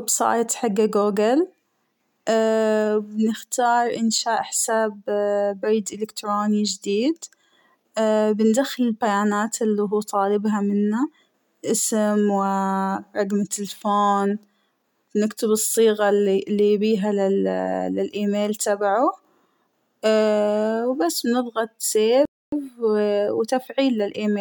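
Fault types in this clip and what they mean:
playback stall: at 22.25 s the speech cuts out in mid-flow and the output sits silent for about 0.27 s, until 22.52 s, after which the sound carries on. A gap like this, dropped in the middle of a phrase rather than at a natural pause, is likely the player starving for data or having its audio thread held up, so nothing reaches the output until the supply of samples resumes.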